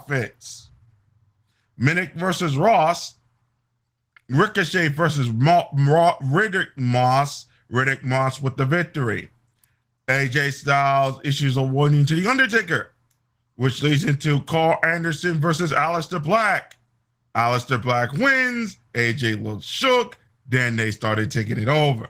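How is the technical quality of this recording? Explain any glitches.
Quality is held back by plainly audible Opus voice compression throughout the speech. Throughout, the low band is modelled by linear prediction and the upper band coded coarsely, consistent with roughly 16 kbps hybrid mode. This leaves hoarse, slightly robotic speech, and a spectrogram shows a blotchy, smeared upper band changing in 20 ms blocks.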